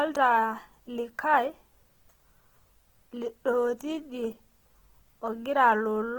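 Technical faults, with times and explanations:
Throughout, Opus compression: the speech sounds rough and grainy, with plainly audible damage, though the band still reaches about 20.1 kHz. This likely comes from Opus's CELT mode at a low rate (fitting around 16 kbps) filling starved bands with folded or noise content.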